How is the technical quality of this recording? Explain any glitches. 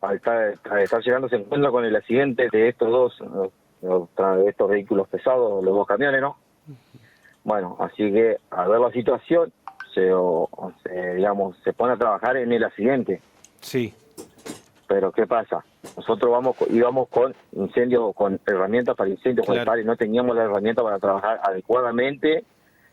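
The recording has one real problem: gain pumping runs through the whole clip. The level ducks by around 10 dB under each loud sound, likely from input gain set too high with a fast limiter clamping down.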